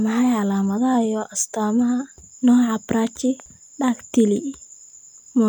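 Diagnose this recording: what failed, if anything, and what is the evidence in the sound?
Hard clipping at a converter or gain stage: a brief crackle at 4.19 to 4.21 s, where the speech peak overran full scale by about 1 dB and was cut flat. The waveform shows squared-off tops there. The spectrogram shows a thin vertical smear of high harmonics.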